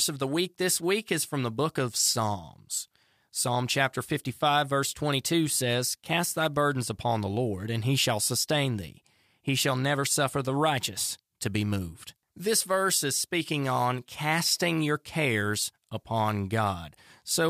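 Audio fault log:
The signal carries no technical fault that a listener can pick out at any point.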